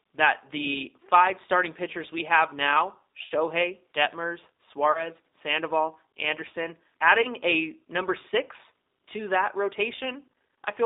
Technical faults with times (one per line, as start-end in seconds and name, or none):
0.00-10.86 G.729 codec
3.24-3.32 VoIP packet loss concealed by the speech codec
4.92-5.09 VoIP packet loss concealed by the speech codec
7.22-7.29 VoIP packet loss concealed by the speech codec